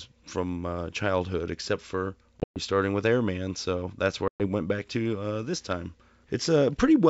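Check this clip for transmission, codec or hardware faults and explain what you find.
Two hard-edged dropouts break the speech, at 2.40 to 2.58 s and at 4.28 to 4.42 s, each followed by a short spell of slight distortion before the sound settles. This is packet loss on an ADPCM call. In the first event about 140 ms goes missing in gaps spread over 160 ms, the longest lasting 120 ms. The second loses 120 ms. In both, several packets were dropped and replaced with silence. ADPCM codes each sample as a difference from a prediction, using a step size that adapts over time. The silence left the receiving decoder's predictor and step size out of step with the sender's, which causes the disturbance after each gap until the two re-converge. The G.722 wideband coding sounds clean apart from that, consistent with its full 64 kbit/s mode.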